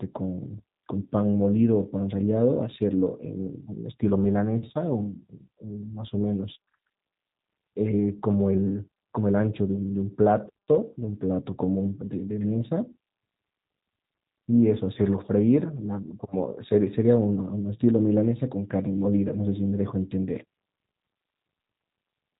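From start to finish the speech carries the sound of the G.729 codec, a low-rate VoIP coder whose character fits roughly 8 kbit/s. The voice is rebuilt from a vocal tract model, a pitch predictor and a handful of pulses per frame, so it comes across plainly rough and faintly synthetic. A spectrogram shows a hard ceiling at 4 kHz with nothing above, and smeared, coarse harmonics below it.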